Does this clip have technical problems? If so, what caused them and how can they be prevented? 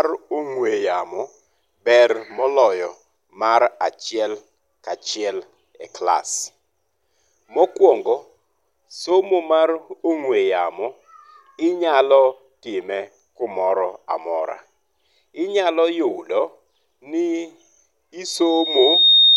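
Yes. At 18.25 s a loudspeaker feedback squeal kicks in and runs right to the end of the clip at 19.37 s. It's a single tone at 3.7 kHz that swells up in well under a second and ends up about 5 dB louder than the speech. The mic was picking up the speaker it was feeding, and at that frequency the loop had more than unity gain, so the tone kept feeding itself. To prevent it, keep the mic out of the speaker's throw, bring the gain down, or notch out that band.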